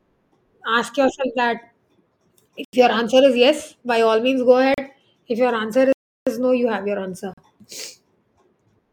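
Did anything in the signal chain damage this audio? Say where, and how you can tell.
Yes. The speech drops out in four blocks of digital silence at 2.65 to 2.73 s (85 ms), 4.74 to 4.78 s (37 ms) before "if your", 5.93 to 6.27 s (341 ms), and 7.34 to 7.38 s (40 ms) after "your answer". Each cuts out and back with no fade. On a waveform the gaps are flat lines, and on a spectrogram they are black columns. The 85 and 341 ms gaps fit 4096- and 16384-sample buffers at 48 kHz, so the driver or buffer stage was probably not filled in time.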